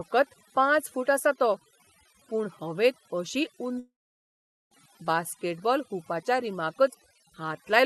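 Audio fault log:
Throughout: overdone noise removal. The background between phrases drops, dotted with brief twinkling specks. Individual frequency bands that sit close to the estimated noise level are pushed far down or switched off, and the quieter parts of the speech go with them. Unlike the broad, smooth top-end loss of the call codec, whose high frequencies stop near 12 kHz, this damage flickers from moment to moment.
3.79–4.74 s: long network dropout. Just after "पूण हवेंत अशी", no new audio arrives for about 0.94 s. The last sound is stretched into a fading buzz or hiss, which then gives way to silence or a low steady noise for most of the gap. About 0.9 s of material is lost, and the speech resumes further on without it. Because of the fading fill followed by a skip, the likely cause is lost packets rather than a pause in the speech or a processing fault.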